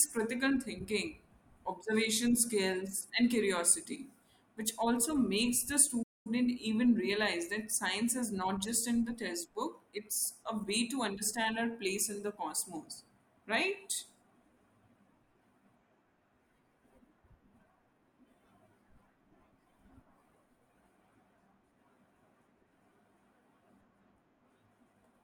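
Speech that cuts to silence in mid-flow at 6.02 s and resumes at 6.27 s, a gap of about 225 ms, is a playback stall. The player most likely ran out of buffered data or had its output thread blocked, so nothing reached the output until it recovered.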